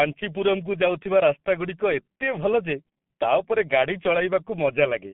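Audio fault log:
throughout G.723.1 codec: the speech has passed through a heavily compressed G.723.1 telephony link, a low-rate codec that fits a bitrate of around 6.3 kbit/s and codes in 30 ms frames. The line passes only about 150 Hz to 3.5 kHz, so everything above is gone and the speech sounds muffled. The codec's slowly updated voice model leaves a hoarse, rough texture, and quick consonants smear together instead of landing crisply.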